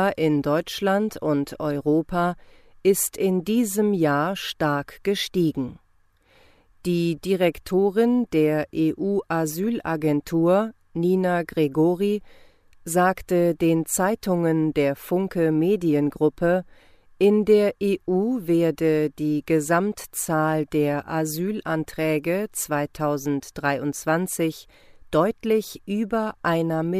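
Speech recording, no technical faults detected.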